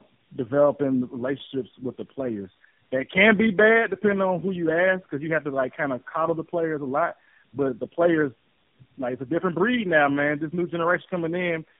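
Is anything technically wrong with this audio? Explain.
Yes. Throughout the speech there is tandem speech coding: the audio passed through three low-rate speech codecs in a row, decoded and re-encoded at each handover. That fits a GSM full rate, G.729A and AMR-NB chain. Each coder models the previous one's errors, so speech sounds rough, muffled and warbly. On a spectrogram, energy stops sharply at 3.8 kHz, harmonics look smeared and broken, and formants appear blurred and unsteady.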